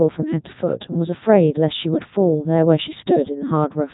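From start to finish the speech carries heavy Codec 2 vocoder damage, with the robotic, buzzy sound of a low-rate digital-radio link; the character fits Codec 2's top mode of around 3.2 kbit/s. Only pitch, voicing, energy and a coarse spectral envelope survive, and the decoder rebuilds the voice from summed sine waves. A spectrogram shows regular harmonic stripes, smeared noise and nothing above 3.8 kHz, and the waveform bears little resemblance to natural speech.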